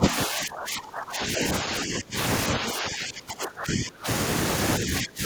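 Speech dips by roughly 20 to 25 dB at 0.0–1.44, 1.61–2.16, 2.52–4.07 and 4.79–5.25 s. This is likely speech suppressed in double talk, where an echo canceller attenuates the near talker.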